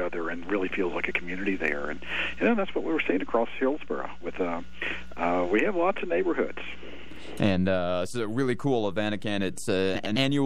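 At 9.95 s, about half a second before the end, the audio turns to a brief garbled flutter lasting until 10.17 s. These are frames out of order. Two neighbouring runs of frames were swapped in transit and decoded in that order. Each run is about 104.5 ms, which fits blocks of four frames. The stretch therefore plays with its halves exchanged. No time is lost.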